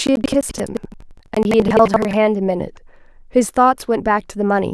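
From the start of the clip until about 2.18 s, the speech carries a rough, robotic rattle pulsing at about 11.7 Hz, riding on the signal itself. This is buffer tearing. The writing program and the playback hardware have drifted out of step around a ring buffer, and the repeat rate fits a 2048-sample buffer. In each period, roughly a fifth of the audio is stale material from around 150 ms earlier, spliced in with abrupt joins at both ends.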